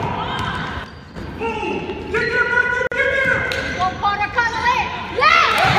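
At 0.84 s there is a sudden gain jump. The whole signal drops by about 9 dB in one step, background noise included. It stays down until 1.16 s, then snaps back. This was likely a gain change applied instantly, with no ramp.

At 2.87 s there is a gap at a join of encoded pieces. The sound breaks off in a 46 ms gap, its edges smeared so the silent part is shorter, then carries on where it left off. Two separately encoded segments were joined without trimming the encoder's start delay and final-frame padding.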